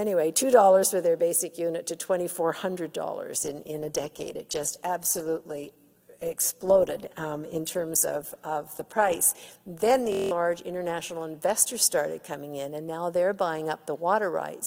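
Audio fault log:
3.44–14.03 s, call bitrate drop: the encoder rate falls from 128 kbps to 15 kbps and stays at its lowest for about 5.8 s. The coarser coding and the high-frequency cut-off leave the sound rough, watery and muffled until the rate recovers.
10.12–10.31 s, system hang loop: a 23.22 ms slice repeats exactly eight times, giving a buzzing stutter at 43.1 Hz while roughly 200 ms of audio is lost. This fits a frozen driver leaving the hardware cycling through a 1024-sample buffer.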